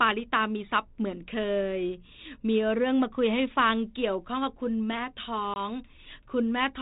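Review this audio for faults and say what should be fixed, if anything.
Packet loss on an ADPCM call at 5.54 to 5.60 s cuts about 20 ms, roughly one packet, from the speech. The G.726 decoder's adaptive predictor and step size lose step with the sender's, so the audio resumes slightly distorted before recovering. A waveform shows a flat, hard-edged gap. A spectrogram of the 32 kbit/s stream, already empty above 4 kHz, shows a sharp vertical blank band. To prevent it, add packet loss concealment and jitter buffering, with the decoder state resynchronised after any lost packet.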